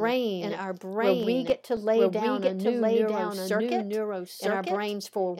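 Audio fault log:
Throughout: doubled audio track. The whole speech clip runs twice, with a second copy at roughly the same loudness trailing about a second behind the first. That copy is full-band and completely dry, with no decay or room colour, so it sounds like the recording layered over itself, not like a real echo. The likely cause is the signal being captured again through a slower path, or an edit leaving two copies out of step.
1.23 to 1.90 s: CD scratch ticks. Six small ticks crowd into about two thirds of a second, roughly nine a second, each lasting a couple of milliseconds at most. That pattern fits a scratch or blemish on the disc passing the laser once per turn, wiping out more data than error correction can rebuild, so the player interpolates or mutes those few samples each time.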